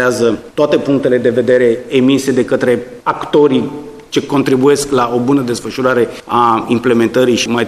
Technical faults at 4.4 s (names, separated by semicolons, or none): hard clipping